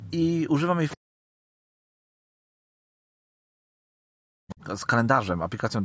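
At 0.89 to 0.97 s there's a brief scrap of the other side's voice leaking through, probably loudspeaker echo the canceller missed, sitting somewhere around 15 dB under the talker. Then from 0.97 to 4.6 s the talker's speech keeps dipping and cutting out for roughly three seconds in total, sometimes by as much as 40 dB. That's speech suppressed in double talk, likely the canceller ducking everything while both sides spoke. At 4.49 to 4.54 s another very faint leak of the far side slips through.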